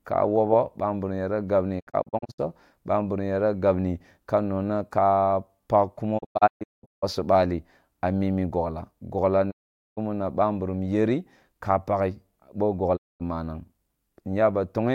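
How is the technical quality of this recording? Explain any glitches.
The recording is marred by four digital broadcast dropouts. Each time, the receiver stopped getting valid frames and muted, fading to silence over about 20 ms before recovering:

1.79–2.40 s: Between "ka wogho bamburum yara" and "bamburum yara gabni", a cluster of short holes, none longer than 64 ms.

6.17–7.04 s: Broken gaps totalling 0.64 s.

9.50–9.99 s: After "amimi bogla gogla ni", before "na ba".

12.96–13.22 s: One further gap.

The speech sent during these gaps is simply gone.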